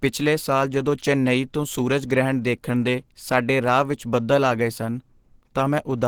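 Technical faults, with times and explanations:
Throughout, Opus compression: the speech has a plainly audible hoarse, grainy roughness, with the upper register sounding filled in by noise rather than clean detail. The likely cause is Opus running in its hybrid mode, where a speech coder handles the lower band and the upper band is rebuilt from band energies, at a rate that fits roughly 16 kbps. A spectrogram would show energy reaching about 20.2 kHz without gaps, but the high band would look smeared and noise-textured instead of finely structured.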